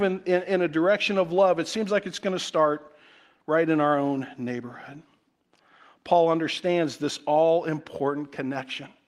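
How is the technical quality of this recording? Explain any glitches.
No glitches turn up anywhere in this speech recording, so there's nothing to explain.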